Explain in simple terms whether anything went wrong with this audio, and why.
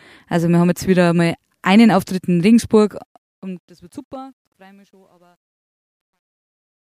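Truncation distortion on a fade runs from 2.75 s to the end of the clip at 6.88 s, and it is worst from 4.33 s onward. The speech fades out from 2.75 s, but the volume stage doing the fade keeps too few bits and adds no smoothing noise, which fits an 11-bit stage. As the level drops, the waveform is forced onto a few coarse steps, so the quiet tail turns gritty.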